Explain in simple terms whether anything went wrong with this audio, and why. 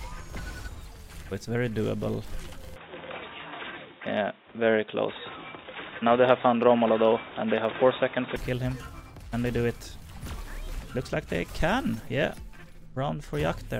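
From 2.76 to 8.36 seconds the sound turns dull and boxy, losing everything above about 3.8 kHz, with a change in loudness and faint new background noise, then clears again. The likely cause is an input switched to a poorer device partway through recording.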